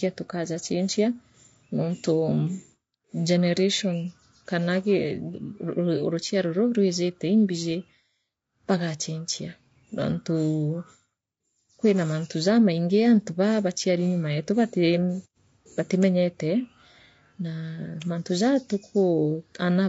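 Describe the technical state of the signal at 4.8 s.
At 4.8 s the speech carries plainly audible coding damage that runs through the whole recording, most likely low-delay AAC compression of the AAC-ELD kind, at a quality that fits roughly 32 kbps. Its short frames resolve the pitch harmonics coarsely, so the voice sounds rough and grainy. On a spectrogram the harmonic stripes look smeared, with noise filling the gaps between them and a thin or patchy top band.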